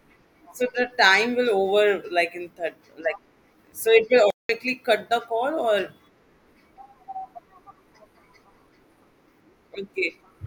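At 4.30 s the speech cuts to silence mid-flow for about 0.19 s, resuming at 4.49 s. This is a playback stall, likely caused by the player running out of buffered data or its thread being blocked until output recovered.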